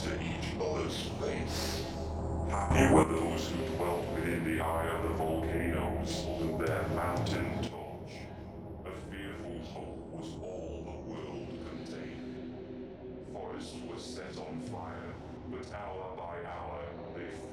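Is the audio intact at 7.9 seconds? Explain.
No. At 7.67 s the level drops by about 9 dB in a single step, a sudden gain jump that lasts until the end of the clip at 17.5 s, so 7.9 s falls inside it. The sound and its background noise fall together, with no fade, which points to a likely digital gain change applied between one sample and the next without a ramp. On the waveform the envelope shrinks abruptly at that instant, and the spectrogram darkens evenly across all frequencies from there on.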